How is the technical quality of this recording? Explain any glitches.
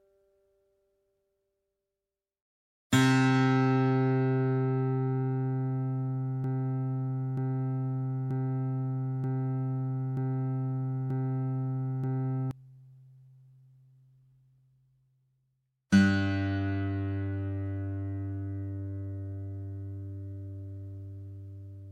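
The recording has one clear glitch. From 6.44 to 12.51 s it gets stuck in a broken-record loop. A fragment about 0.93 s long plays seven times, back to back, with identical content each pass. It sounds like a skipping disc with perfectly even repeats. The likely cause is a stall in the player, encoder or stream, which kept resending the last fragment it held. The audio that belonged in those six seconds is missing.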